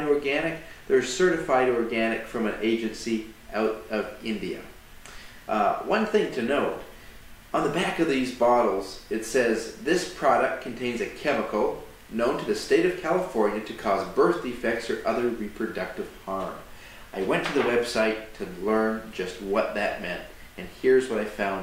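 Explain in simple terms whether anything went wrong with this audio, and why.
Nothing stood out as wrong on listening; no part of the audio drew attention as a technical problem.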